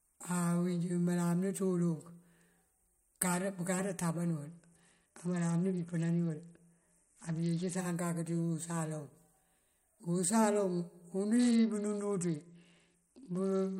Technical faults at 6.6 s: Bluetooth SBC bit pool drop

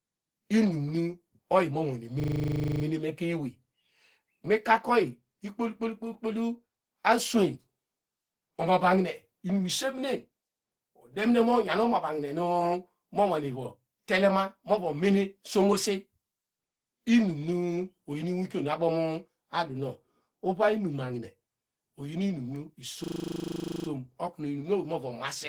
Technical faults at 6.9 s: Opus compression

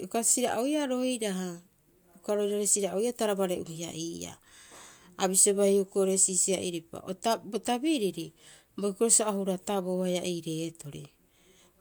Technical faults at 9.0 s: none

